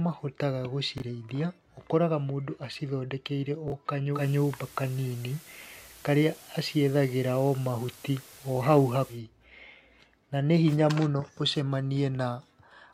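At 0.98 to 1.02 s and again at 3.68 to 3.72 s, a brief jumbled blip: chunks out of order, where one 20 ms chunk played a chunk late, leaving hard joins.

From 4.12 to 9.21 s, hiss rises and level shifts about 3 dB. This is digital radio blending to analogue FM, with 123 ms cross-fades.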